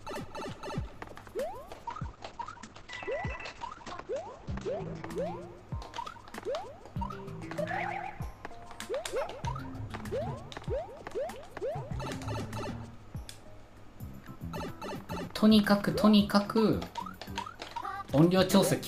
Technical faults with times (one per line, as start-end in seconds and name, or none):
1.75-5.11 call bitrate drop